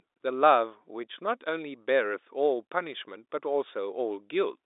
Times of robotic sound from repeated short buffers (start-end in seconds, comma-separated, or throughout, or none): none